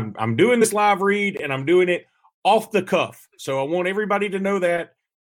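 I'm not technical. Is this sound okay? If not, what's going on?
No. At about 0.61 s, between "I'm doing" and "live read and I'm", there is a short case of compressed frames skipped. Some damaged or missing chunks of the compressed file weren't played, so the speech jumps ahead by roughly a twentieth of a second.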